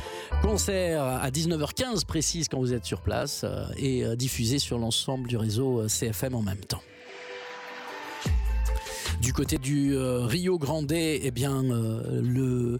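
Dropped buffers, likely an overrun, at 1.96, 3.22, 6.33 and 9.56 s: samples were overwritten before being read, so the sound skips ahead with no gap, losing about 5 ms at the first two and about 15 ms at the last two.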